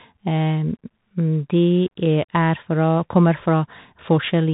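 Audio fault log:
Throughout, Bluetooth CVSD headset codec: the speech has narrowband headset quality, with nothing above 3.8 kHz. That fits a 64 kbps one-bit delta stream, where each sample only steps the level up or down and the step size adapts. Fast, loud high content outruns the step, so sibilants come out scratchy, and a grainy hiss sits under the speech. On a spectrogram the energy stops at a hard ceiling near 3.8 kHz and a noise floor fills the band beneath it.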